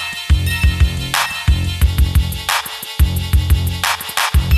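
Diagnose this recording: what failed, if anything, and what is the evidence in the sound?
Nothing failed; no fault is audible anywhere.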